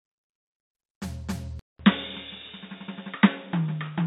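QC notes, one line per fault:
1.59–4.07 s, input switched to a poorer device: the music cuts out for 0.2 s, then returns dull and boxy, with nothing above 3.8 kHz, a level drop of roughly 5 dB, and a new background noise sitting around 30 dB under the signal. The sudden loss of top end, change of tone and fresh noise floor point to the recording likely moving to a lower-grade microphone or a headset's narrowband call profile mid-take.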